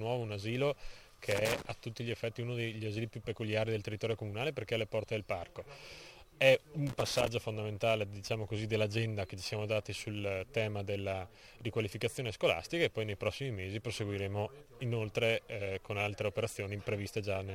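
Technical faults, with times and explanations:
1.31 to 1.70 s and 6.87 to 7.28 s, loose connector crackle: two irregular bursts of scratching, each about 0.4 s, as a worn contact rapidly makes and breaks, chopping the signal and popping on any DC. Unlike steady surface crackle or evenly spaced digital clicks, it comes in ragged clusters.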